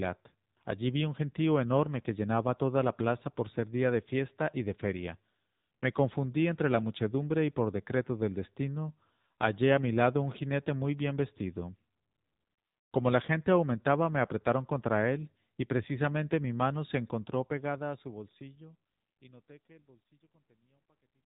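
Speech runs through the AMR narrowband mobile codec for its whole length. Nothing above 4 kHz survives, and the voice has the plainly audible buzzy, synthetic edge of the vocal-tract model rebuilt from a few pulses every 5 ms. That degree of damage fits a low AMR-NB mode around 7.4 kbps. A simple 4 kHz low-pass would dull the sound but leave it natural; here the buzz shows it was resynthesised. The fade-out from about 17 s to 21.3 s is smooth.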